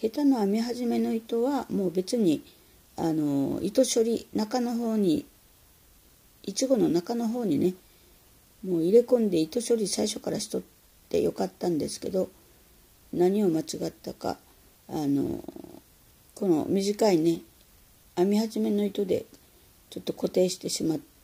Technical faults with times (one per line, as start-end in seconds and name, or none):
none